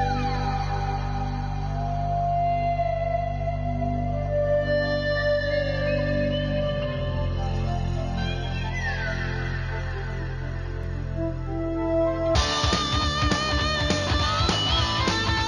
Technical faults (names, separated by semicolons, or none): repeated buffer